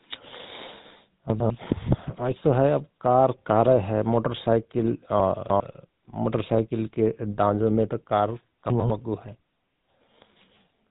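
GSM full-rate codec damage runs throughout the speech. The codec models the vocal tract and excites it with a sparse, regularly spaced pulse train, which leaves a plainly audible buzzy, gravelly roughness. Nothing passes above 3.8 kHz, and the sound fits a 13 kbps stream.

Chunks out of order at 1.3 to 1.5 s: a 100 ms chunk plays one chunk late, after audio that should follow it. Nothing is lost, but the swapped order creates three hard joins, heard as a brief jumbled moment.

Chunks out of order again at 5.2 to 5.6 s: here a 100 ms chunk lands three chunks late, so a longer stretch is reordered. It has three abrupt joins, and the span sounds scrambled rather than missing.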